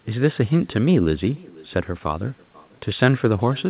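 Throughout the speech, an echo with no canceller trails every phrase by about half a second. The far end's loudspeaker feeds its microphone, and nothing removes it. The copy sits about 25 dB down, thin, and narrowband, with nothing above 4 kHz.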